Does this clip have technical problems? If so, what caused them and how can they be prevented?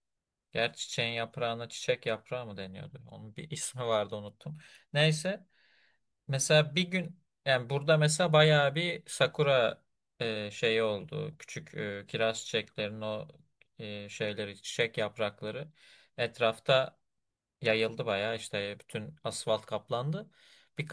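No, nothing technical gets in the way here, so there's no problem to trace back or prevent.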